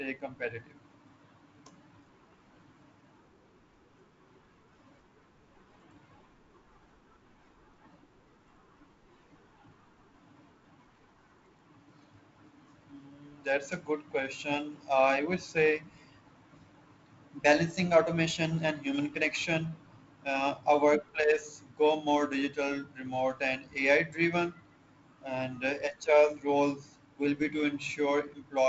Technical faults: none

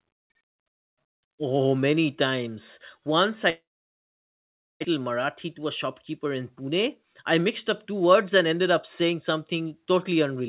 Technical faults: long network dropout; jitter buffer speed-up

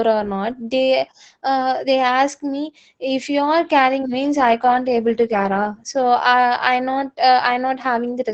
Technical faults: Opus voice compression

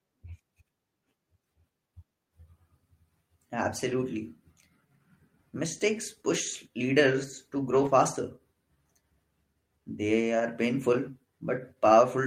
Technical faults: lost packet rebuilt from error correction

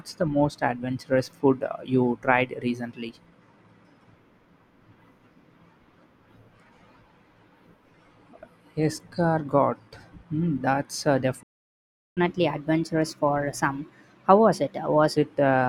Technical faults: playback stall; catch-up at higher speed

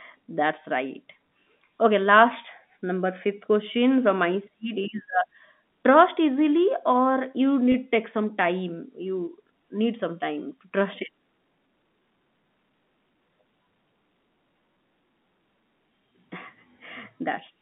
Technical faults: packet loss with pitch repetition

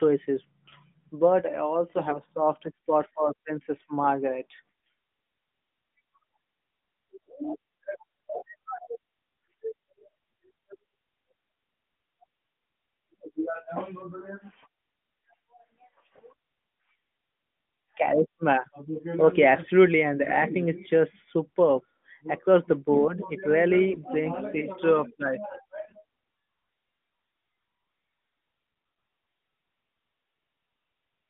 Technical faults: AMR bit errors

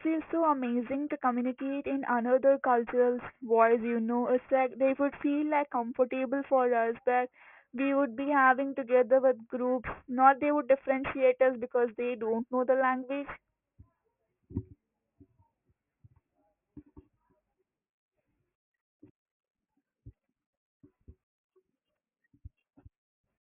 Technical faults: aliasing

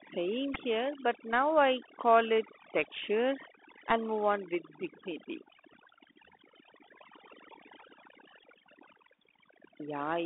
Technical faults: overdone noise removal; Bluetooth CVSD headset codec; Bluetooth headset packet repeated

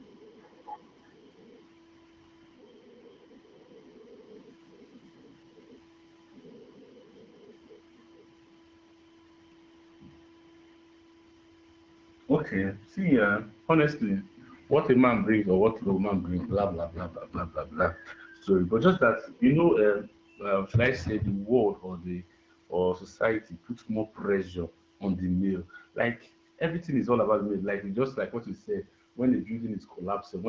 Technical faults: none

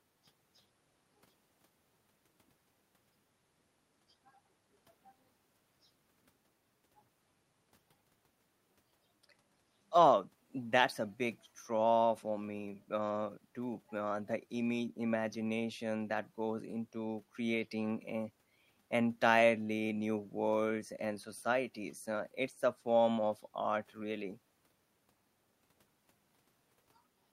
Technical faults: none

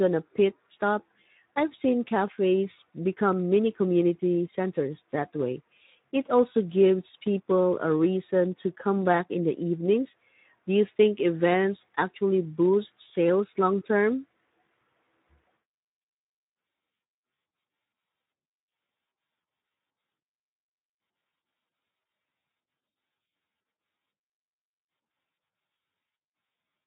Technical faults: Speex codec

